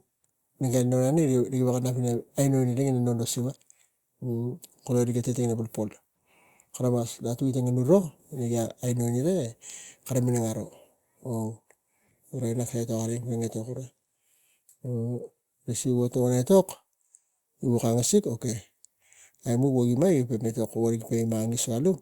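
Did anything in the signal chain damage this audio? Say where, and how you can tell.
No, nothing in the signal chain damaged this speech.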